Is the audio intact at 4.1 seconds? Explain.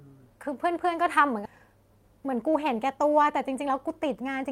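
No, at 4.1 seconds you're inside a jitter buffer speed-up running from 2.02 to 4.50 s. The receiver had too much audio queued, so it kept snipping out short pitch-period chunks, roughly a fifth of a second in total, making the speech run about 108% fast at unchanged pitch and sound a bit rushed.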